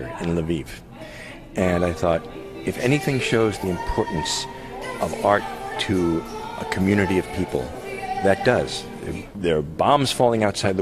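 Nothing in the audio stood out as a technical problem on listening.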